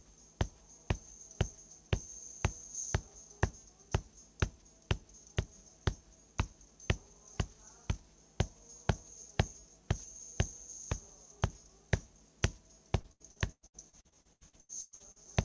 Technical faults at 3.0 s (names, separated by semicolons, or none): none